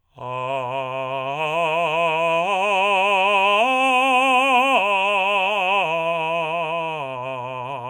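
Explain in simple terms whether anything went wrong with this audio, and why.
Nothing went wrong with this bit of music: there are no glitches, dropouts or other technical problems to point to anywhere in it.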